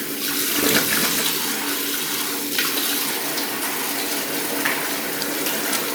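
A brief jumbled stutter is heard from 1.70 to 1.72 s, the mark of chunks out of order: one chunk of about 10.7 ms arrived one position late and played after its successor, so nothing is missing, but three hard joins break the waveform.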